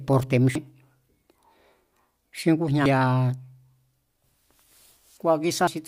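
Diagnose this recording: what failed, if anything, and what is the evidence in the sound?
The failure is in the codec stage, from damaged data in a compressed stream. Three short glitches break into the speech, at 0.55 s, 2.86 s and 5.67 s. Each is a brief chirp, click or short hole. Some bytes of the encoded stream were lost or corrupted. At each point the decoder misread the bad frames and lost sync. It then hunted for the next valid frame header before normal decoding resumed.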